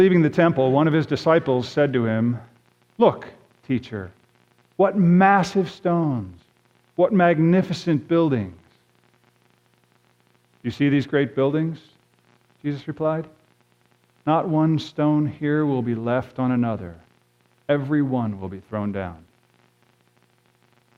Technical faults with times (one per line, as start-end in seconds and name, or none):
none